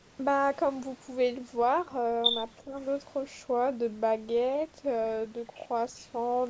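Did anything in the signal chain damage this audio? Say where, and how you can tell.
Yes. Speech suppressed in double talk, 2.65 to 2.74 s, call processing: a brief dip of around 5 dB, likely the echo canceller ducking the talker during far-end speech.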